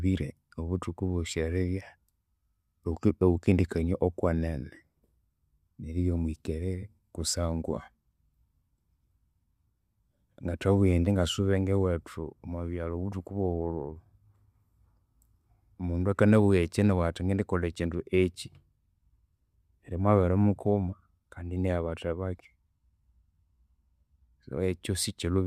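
Nothing in the speech stood out as a technical problem on listening.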